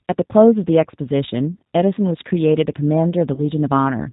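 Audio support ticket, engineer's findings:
G.729 codec across the whole clip: nothing above 4 kHz, slightly rough, synthetic speech, plainly audible damage. Sounds like the 8 kbit/s G.729A path, rebuilding speech from a vocal-tract filter plus a few pulses per 10 ms frame. Probable component: trunk or gateway codec.

VoIP packet loss concealed by the speech codec, 3.34 to 3.44 s: about 30 ms of missing audio papered over with a stretched, fading fill, then weak or distorted speech until the decoder's state recovers. Fits one dropped packet; the G.729 decoder extrapolates its last pitch and filter, lowering gain each frame. Check network jitter/loss.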